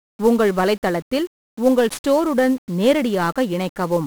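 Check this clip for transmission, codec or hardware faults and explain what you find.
One codec fault is present, and it lasts the whole speech clip. It is 1-bit DFPWM compression. Each sample is a single bit that nudges an adaptive level up or down. That coarse tracking leaves heavy broadband quantisation noise. The voice turns fuzzy and crackly, and its treble sinks beneath hiss.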